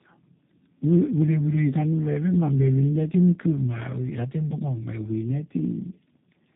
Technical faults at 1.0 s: tandem speech coding

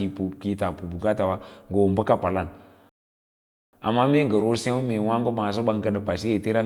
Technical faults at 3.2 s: rebuffering stall

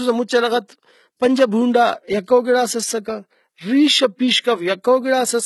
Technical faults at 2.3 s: low-bitrate audio saved at a high bitrate

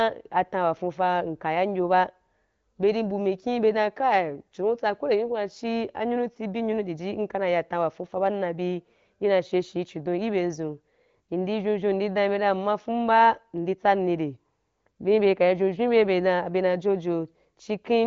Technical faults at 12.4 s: none

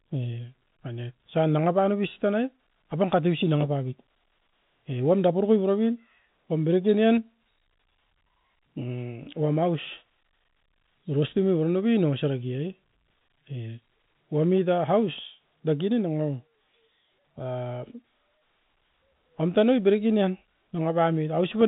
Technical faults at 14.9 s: none

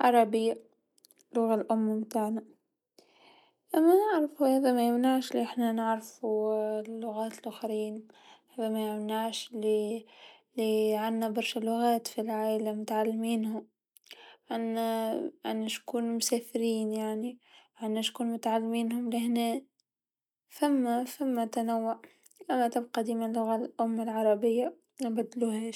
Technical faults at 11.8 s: none

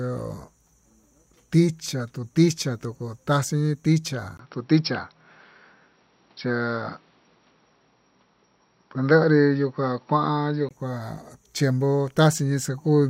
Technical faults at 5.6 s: input switched to a poorer device

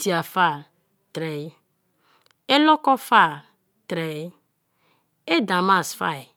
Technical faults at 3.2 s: none

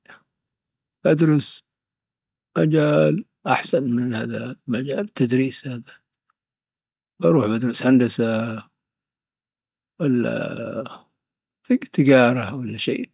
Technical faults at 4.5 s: none

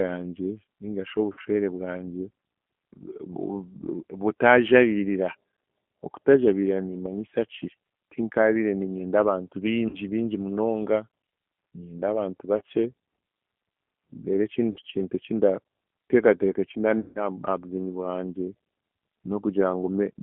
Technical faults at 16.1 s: G.729 codec

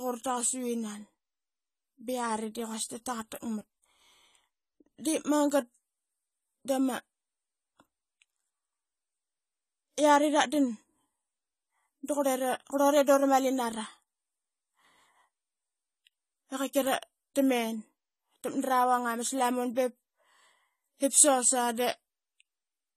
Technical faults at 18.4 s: AAC compression

